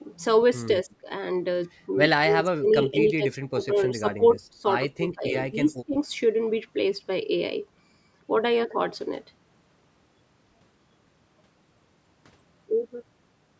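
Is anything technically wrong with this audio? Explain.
Yes. The speech dips in level four times, at 0.85 to 1.07 s, 2.2 to 4.64 s, 4.97 to 5.31 s and 5.49 to 5.96 s. The likely cause is speech suppressed in double talk: while both ends spoke at once, the call's echo canceller could not tell this talker apart from returning loudspeaker echo and attenuated everything it picked up. The speech sinks by roughly 15 to 20 dB in choppy bursts. The longest stretch, from 2.2 s, loses around a second and a half of level in pieces. The audio stops at 8 kHz, which is the ordinary band limit of call processing.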